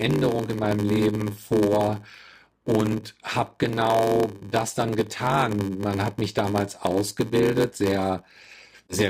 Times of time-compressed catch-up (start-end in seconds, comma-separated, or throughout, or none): none